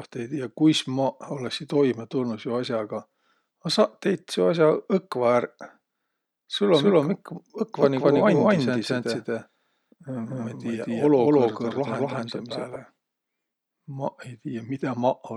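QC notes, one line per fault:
6.74–12.76 s: doubled audio track. A full-band copy of the speech trails the original by roughly a fifth of a second at about the same level, with no decay or room colour, and cuts in and out abruptly, likely from a second capture path or misaligned edit.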